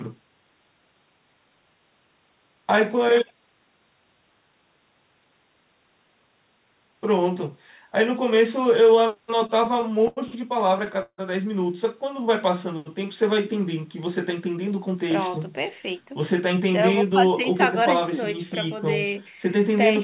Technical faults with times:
9.13-10.19 repeated stalls (stutter)
11.02-11.20 call audio freeze
14.67-17.99 jitter buffer speed-up

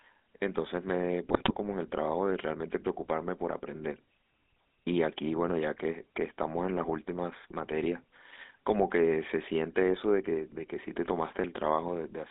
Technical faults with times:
0.00-12.30 GSM full-rate codec
1.28-1.54 GSM bit errors

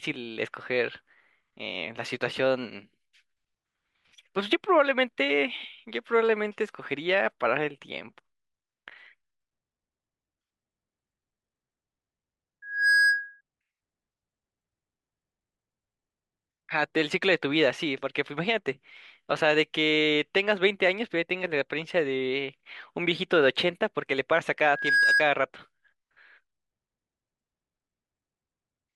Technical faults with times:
12.62-13.41 loudspeaker feedback squeal
24.68-25.28 loudspeaker feedback squeal

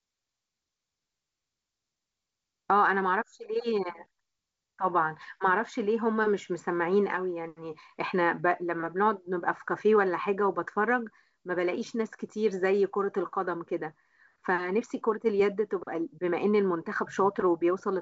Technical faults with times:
none

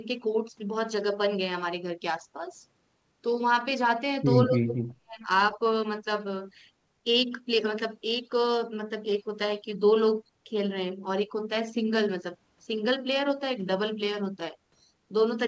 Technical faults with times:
4.46-5.22 speech suppressed in double talk

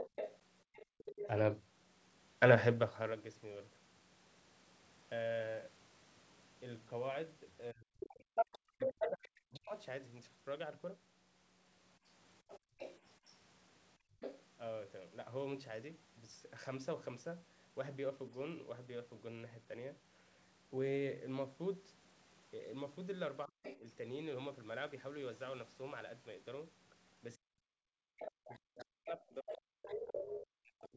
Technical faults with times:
0.00-1.31 other side's voice leaking through
0.86-0.98 background gated by the echo canceller
7.72-9.74 speech suppressed in double talk
8.35-14.45 other side's voice leaking through
12.59-14.20 background gated by the echo canceller
23.46-23.85 speech suppressed in double talk
23.63-23.79 other side's voice leaking through
27.36-30.96 speech suppressed in double talk
28.22-30.42 other side's voice leaking through

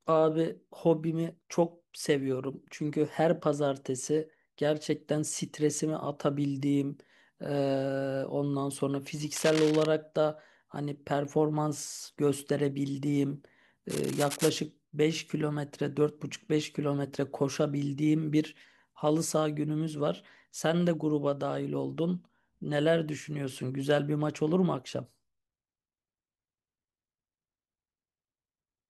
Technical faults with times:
9.36-9.86 cable scratch noise
13.90-14.50 cable scratch noise

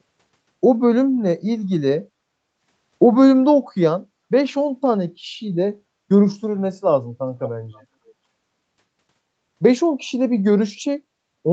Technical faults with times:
7.42-7.85 echo leak

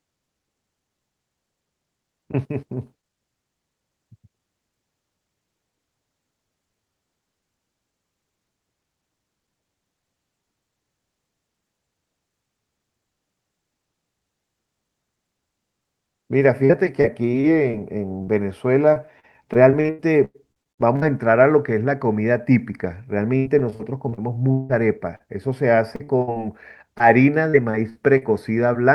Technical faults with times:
16.65-17.75 repeated packet loss (robotic sound)
18.23-18.29 short concealed packet loss
18.93-21.04 repeated packet loss (robotic sound)
23.38-24.71 repeated packet loss (robotic sound)
25.15-25.22 burst of packet loss
25.96-26.38 repeated packet loss (robotic sound)
26.98-27.02 short concealed packet loss
27.50-28.23 repeated packet loss (robotic sound)

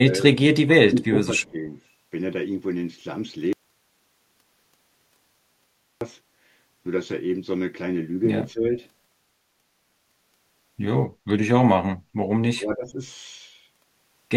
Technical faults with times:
0.08-1.77 speech suppressed in double talk
1.42-1.49 echo leak
8.52-8.67 speech suppressed in double talk
11.73-11.89 speech suppressed in double talk
12.53-12.98 speech suppressed in double talk

